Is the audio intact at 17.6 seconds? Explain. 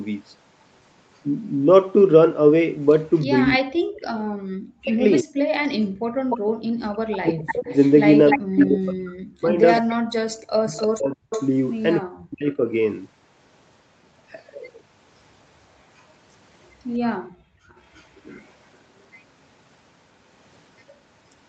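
No. From 15.98 to 18.42 s an echo leak puts a very faint copy of the speech 347 ms behind it. The likely cause is a loudspeaker echo canceller letting residue return. It is a distinct delayed repeat, not smeared reverb. From 17.22 to 17.69 s the background is gated by the echo canceller: the room sound drops by about 40 dB while the microphone is ducked, then returns. That brief dip is tied to playback, unlike a steady noise gate.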